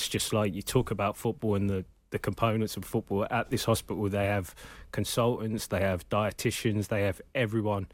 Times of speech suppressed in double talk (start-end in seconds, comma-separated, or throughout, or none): none